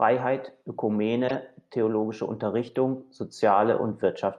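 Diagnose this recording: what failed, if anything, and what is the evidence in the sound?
The codec stage failed: a corrupt frame decoded. A loud, harsh burst cuts through the speech from 1.28 to 1.31 s. A very faint blip follows at 2.75 s. Damaged compressed data was decoded anyway, so energy landed at the wrong frequencies.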